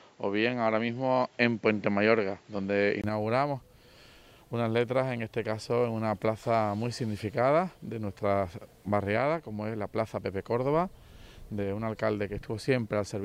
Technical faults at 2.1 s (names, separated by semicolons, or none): input switched to a poorer device